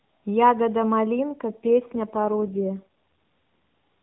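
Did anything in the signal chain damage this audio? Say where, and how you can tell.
Yes, an AMR rate drop on the network side: speech turns buzzier from 1.50 to 2.83 s with no gap or band change, fitting 12.2 dropping to 4.75 kbps.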